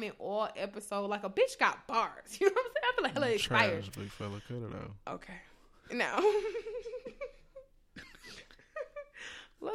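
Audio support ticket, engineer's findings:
Wireless mic noise hit at 3.92 s, lasting 37 ms, just before "big fella". Quick swish of static over the speech. Analogue FM radio link fading as reflections cancel, so receiver noise jumps up for a moment. Worth checking antenna placement.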